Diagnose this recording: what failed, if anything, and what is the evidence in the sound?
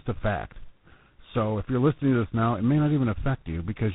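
Tandem speech coding at the codec stage, audible throughout: the speech is rough, muffled and warbly, with nothing above 3.8 kHz. It sounds like about three speech coders in a row, ending in 24 kbit/s G.726, each re-coding the last one's errors. A single codec or a plain low-pass would sound smoother.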